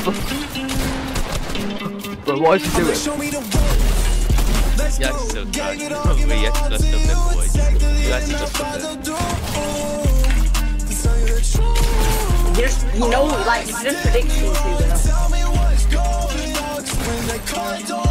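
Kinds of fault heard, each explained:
No technical faults can be heard anywhere in the audio.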